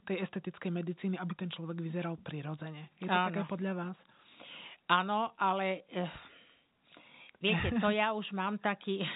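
The speech comes through G.711 telephone coding with its usual ceiling at 4 kHz and only a faint quantisation hiss that follows the level well beneath the signal, and no technical fault can be heard anywhere in it.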